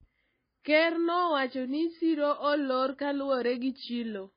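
MP3 compression artefacts run throughout the speech. Nothing is heard above 5 kHz, and weak spectral detail flickers between frames, giving a watery, swirly texture with metallic s sounds and smeared onsets. This heavy damage is likely from an MP3 encode at around 18 kbps.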